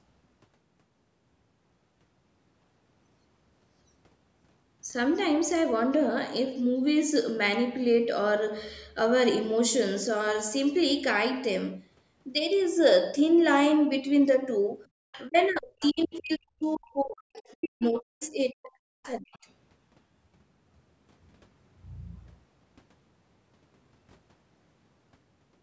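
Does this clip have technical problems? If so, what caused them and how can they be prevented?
Yes. Just before 15 s the room tone behind the speech sinks abruptly, by about 36 dB at its deepest, between 14.88 and 15.0 s, a gap of about a tenth of a second before the ambience returns. This is background gated by the echo canceller: sensing loudspeaker playback, it clamped the microphone gain hard and released once it judged the echo gone. A gentler suppression setting, or better loudspeaker-to-microphone isolation such as a headset, would prevent this.

Faint fragments of a second talker appear underneath, roughly 20 to 30 dB below the main speech, at 15.12–15.47 s, 15.82–16.08 s, 17.5–17.86 s, 18.22–18.26 s and 19.03–19.38 s. The likely cause is the other side's voice leaking through: the far end played over a loudspeaker, and the echo canceller failed to subtract all of it before the microphone signal was sent. 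Using headphones, or giving the canceller time to converge with a stable acoustic path, would prevent this.

From 15.28 to 19.38 s the main speech repeatedly sags and breaks up, dropping by around 40 dB at its worst, for roughly 3 s in total across that stretch, while those leaked fragments are present. This is speech suppressed in double talk, likely caused by both sides talking at once, leaving the canceller unable to separate local speech from echo, so it ducked everything. A full-duplex canceller with reliable double-talk detection, or headphones removing the echo entirely, would prevent this.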